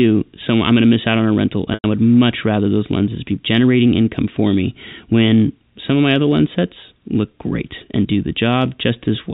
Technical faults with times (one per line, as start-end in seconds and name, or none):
1.74-1.84 packet loss with pitch repetition